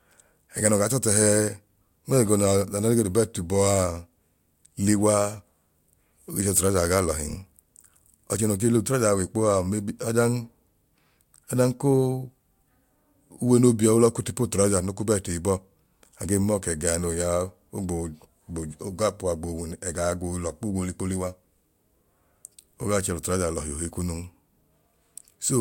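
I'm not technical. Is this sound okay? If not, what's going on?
Yes, nothing in this recording points to a technical fault at any point.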